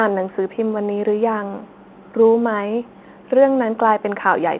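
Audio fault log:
Nothing stood out on listening to this speech, which carries the narrow band of ordinary G.711 telephone coding.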